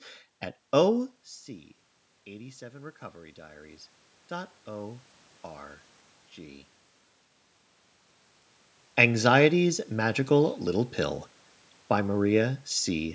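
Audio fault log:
2.61–5.12 s, automatic gain rising: after the input level falls by about 13 dB, the gain control slowly lifts its gain by about 7 dB, so voice and room noise swell together over two and a half seconds, unlike a talker moving closer, where the background stays put.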